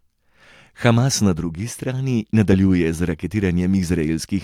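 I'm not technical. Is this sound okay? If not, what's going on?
Yes, nothing in this recording points to a technical problem. There are no dropouts, glitches or other disturbances anywhere in it.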